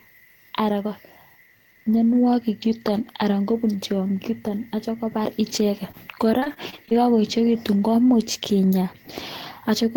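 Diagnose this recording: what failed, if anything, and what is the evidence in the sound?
Repeated packet loss on the network from 5.91 to 6.94 s: concealment patches gaps up to 24 ms, leaving the speech choppy and robotic.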